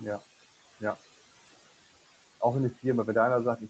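Noise suppressor artifacts run throughout the speech: the suppressor pulls steady room noise down by about 18 dB, so residual noise sinks between phrases and resurfaces underneath speech.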